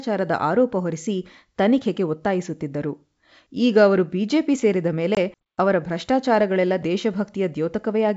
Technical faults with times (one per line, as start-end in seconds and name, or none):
5.15-5.42 packet loss on an ADPCM call